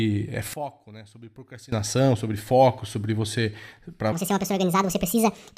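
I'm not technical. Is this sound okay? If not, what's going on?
No, there are two problems in this speech recording.

From 0.54 to 1.72 s, the voice nearly disappears and what remains sounds faint. This is one channel inverted. The likely cause is that one side of the stereo recording was flipped upside down. When both sides are combined into one, as on a phone speaker, the matching parts cancel each other out. The voice sits in both sides, so most of it drops away.

From 4.12 s to the end, the voice suddenly sounds hurried and high, like a cartoon. This is a section at the wrong speed. It plays about 1.64 times too fast, which raises the pitch by nearly an octave. The likely cause is that this part was played back or edited using the wrong timing. Speed and pitch always rise together when that happens.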